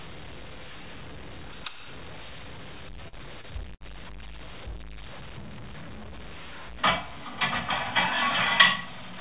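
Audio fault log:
throughout: low bit depth without dither. A gritty, grainy distortion tracks the sound, roughening quieter passages, with error noise only about 15 dB below the signal. This likely comes from truncation to around 7 bits without dither, so the rounding error follows the waveform.
3.08–3.17 s and 3.41–3.45 s: short concealed packet loss. Audio briefly smears or wobbles where about 40 ms and then 20 ms never arrived. The receiver continued the preceding sound to cover each gap and blended back into the real signal.
3.75–3.83 s: burst of packet loss. Roughly 60 ms of audio went missing in a row, so the receiver extended the last sound and faded it, producing a held, decaying buzz or hiss before playback resumes further along, within the call path's 4 kHz band.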